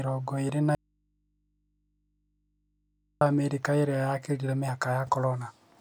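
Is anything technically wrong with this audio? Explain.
Yes. At 0.75 s, just after "ĩrĩ na", the speech suffers an audio dropout to a faint residue lasting until 3.21 s, about 2.46 s in all. The likely cause is a break in the signal feed ahead of a stage that stayed live, leaving an open input. The speech cuts out abruptly rather than pausing or fading, and the gap holds only mains hum roughly 50 dB below the speech level before the speech snaps back.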